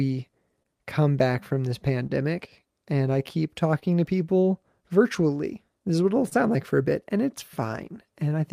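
Clock drift between sender and receiver runs through the whole clip: the sender's clock is about 3% slow, so the receiver's jitter buffer keeps draining and must be topped up.

Repeated timing corrections from 0.16 s to 8.30 s slow playback to 99% speed, adding roughly a tenth of a second in small repeated pieces, heard as a faintly uneven tempo.

Short stalls from a late packet occur at 0.63–0.67 s, 2.07–2.12 s, 3.79–3.84 s and 6.29–6.34 s: the buffer ran empty, so the last sound was held for 26 ms, then 29 ms each time, with nothing missing, giving a brief held sound with a slight buzz or dip.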